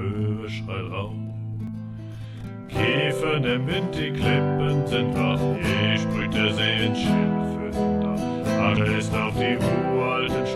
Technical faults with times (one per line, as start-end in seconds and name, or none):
1.67 damaged data in a compressed stream
6.20 damaged data in a compressed stream
8.76 damaged data in a compressed stream